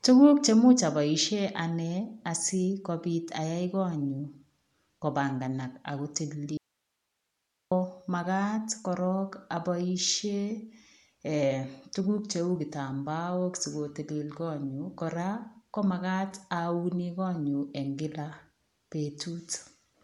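Throughout, the speech has a breathy, grainy edge and nothing above 11.5 kHz, likely from Bluetooth LC3 compression at around 48 kbps. It is band-limited coding, not simple low-pass filtering, because the noise-filled texture remains. From 6.57 to 7.71 s, after "kopanganaak ako" and before "magaat korong", the speech cuts abruptly to hiss about 55 dB down for 1.14 s. This is likely an audio dropout to a faint residue, a lost signal on a still-live path rather than a pause or fade.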